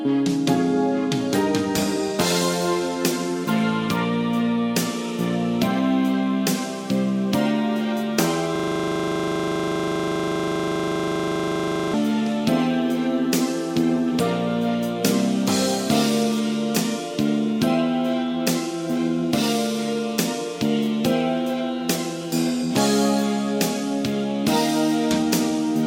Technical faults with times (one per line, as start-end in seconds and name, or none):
8.56-11.94 system hang loop